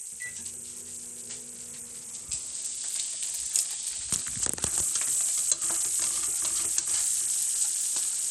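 Across the whole of this everyday sound recording, the top end keeps dropping out and flickering back, and a gritty, grainy noise with aliasing clings to everything, plainly audible from start to finish. The likely cause is Bluetooth SBC compression at a starved bit budget, which fits a rate of about 80 kbps. The encoder splits the audio into frequency bands and, short of bits, gives the quiet upper bands almost nothing while coarsely rounding the rest.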